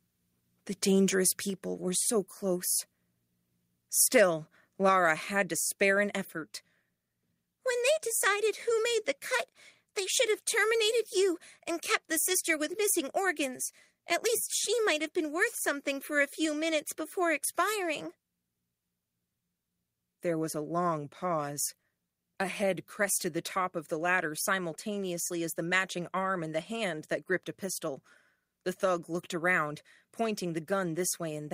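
At 1.5 s the microphone volume was likely stepped down at the input, so speech and background drop about 3 dB at once, just before "were so close".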